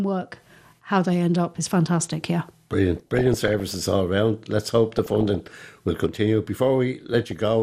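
MP2 compression runs through the whole of this speech recording: the sound is dull, upper bands flicker in and out, and what remains has a granular, gurgling edge. This points to MPEG Layer II coding starved of bits, likely near 80 kbps, so high sub-bands are switched off and the rest coarsely quantised. DAB burbling occurs from 2.97 to 3.80 s, just before "all around", from 4.92 to 5.57 s, just before "will continue", and briefly from 7.27 to 7.40 s. These bursts come from bit errors getting past error correction into the MP2 data, so corrupted samples put short blips of noise in single sub-bands and corrupted scale factors make sub-bands jump in level for up to a frame. The last burst is milder, which fits a lower error rate.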